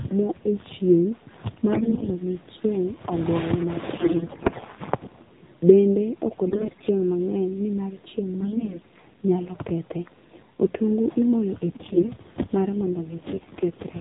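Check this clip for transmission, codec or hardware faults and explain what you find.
Two faults are present: the whole speech clip has passed through a low-rate mobile codec, and six short stretches carry corrupted codec frames.

AMR narrowband mobile codec, throughout: the speech was coded as AMR-NB at 7.4 kbps. The codec models the vocal tract and excites it with a few pulses per 5 ms subframe, with nothing above 4 kHz. At this rate the damage is plainly audible: a buzzy, synthetic edge on the voice as well as the hard 4 kHz ceiling. The synthetic texture is what separates it from a simple low-pass filter, which would dull the sound without making it artificial.

AMR bit errors at 1.72–2.09 s, 3.96–4.64 s, 6.48–6.88 s, 8.40–8.80 s (between "nimar chieng'" and "nyalo kethe"), 11.68–12.11 s and 13.30–13.66 s: frames arrived with their weakly protected bits flipped, at a fairly high rate in the early bursts and lighter toward the end. 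Because the protected core still decoded, the excitation pulses landed wrongly and the fine parameters drifted. The voice turns hoarse, scratchy and gargly while keeping its pitch and loudness. Unlike packet loss, there are no gaps or muted holes.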